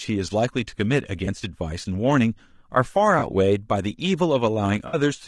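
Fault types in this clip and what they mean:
Low-delay AAC compression: Speech is rough and grainy throughout, with noise between harmonics. Likely short-frame AAC-ELD coding, fitting a bitrate near 32 kbps.
AAC frame loss with concealment: Missing frames were filled from earlier spectrum, giving smeared patches at 1.25 and 3.19 s and a longer 60 ms one at 4.87 s.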